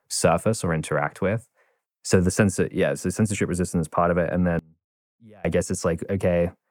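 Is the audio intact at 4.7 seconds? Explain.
No. One channel inverted, from 4.59 to 5.45 s, is the likely cause of what happens here. With one side's polarity flipped, everything common to both channels cancels when they are summed to mono. The centred speech drops by about 30 dB and nearly vanishes, leaving only a faint residue of the small differences between the channels. Full level returns just before "I guess".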